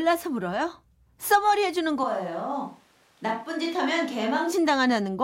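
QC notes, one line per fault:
2.04–4.52 s, switch to a distant microphone: the speech turns abruptly roomy and hollow, with thinner bass and a drop of about 5 dB, and a noise floor rises to roughly 35 dB below the speech, returning just as suddenly at 4.52 s. Likely cause: the close microphone dropped out and a farther one took over. The waveform shows a step down in amplitude with a raised floor between words; the spectrogram shows weaker low frequencies and smeared reverberant tails.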